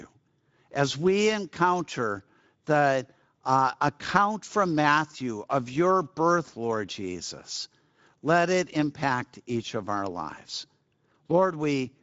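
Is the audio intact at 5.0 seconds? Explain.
No. Speex codec damage runs throughout, including 5.0 s: starved CELP excitation makes speech hoarse and noisy, with nothing above 7.7 kHz. Unlike plain band-limiting, the roughness is in the voice itself.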